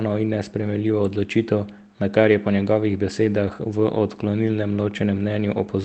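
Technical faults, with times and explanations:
0.61 s and 3.47 to 3.53 s, lost packet rebuilt from error correction: the speech goes briefly rough and grainy with no gap, first for one 20 ms frame, then for 40 ms. Packets were lost in transit, one and then two separate ones. The packets that followed carried coarse low-bitrate copies, which the Opus decoder played in their place, so the sound stays continuous but loses detail and picks up noise.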